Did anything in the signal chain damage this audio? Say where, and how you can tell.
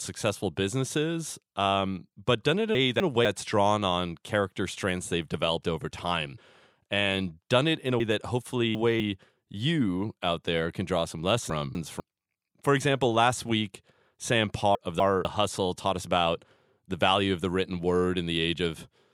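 Yes, chunks out of order, somewhere in the buffer or packet path. After "um but done it", 2.75–3.25 s jumbles before "drawn on character strengths": one 250 ms chunk plays one slot late. Same at 11.5–12.0 s after "there can draw some" and 14.75–15.25 s. Worst is 8.0–9.0 s after "done it in a", a chunk three slots late, before "you out there can". Nothing drops, but each swap leaves three hard joins.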